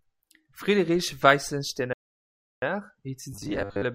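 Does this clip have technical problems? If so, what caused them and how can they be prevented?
Yes. A playback stall runs from 1.93 to 2.62 s: the speech cuts to silence for 0.69 s, likely because the player ran short of data or its thread was blocked, then resumes. A larger playback buffer and a playback thread that nothing else can block would prevent it.

Robotic sound from repeated short buffers runs from 3.33 to 3.84 s: the speech becomes a rigid 100 Hz metallic buzz, likely from a 10 ms chunk being repeated to cover about half the audio that arrived too late. Steady, timely audio delivery with enough jitter buffering would prevent it.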